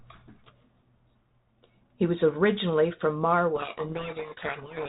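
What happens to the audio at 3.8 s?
At 3.8 s the audio is inside a codec payload misread running from 3.56 s to the end at 4.89 s. The decoder reads the G.726 code words with their bits in the wrong order, burying the speech in harsh distortion that starts abruptly, unlike the level-following hiss of a low G.726 bitrate.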